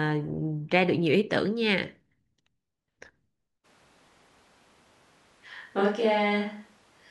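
At 3.66 s the speech turns abruptly roomy and hollow, losing its low end, and stays that way to the end of the clip. This is a switch to a distant microphone, likely because the close microphone's signal dropped out and a farther one took over. Overall level barely changes, but room noise now sits roughly 35 dB below the speech. The instant change, together with thinner bass and extra background, points to a different pickup rather than reverb or equalisation added afterwards.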